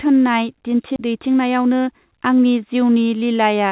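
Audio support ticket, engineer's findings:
Skip ahead, 0.96–0.98 s: speech jumps forward with no fill and no audible gap. Roughly 0.4 s of speech is missing and the two sides are butted together. Probable component is the jitter buffer, which discarded queued audio on overflow, or packets lost in transit while later audio was already waiting, cutting latency by about 0.4 s in one step.

Jitter buffer speed-up, 1.06–2.37 s: speech runs about 7% fast at unchanged pitch and sounds hurried. The receiver's jitter buffer was holding more than its target depth and trimmed pitch-period-sized slices repeatedly to drain the excess, around a tenth of a second in total. This is over a G.711 A-law path band-limited to 4 kHz.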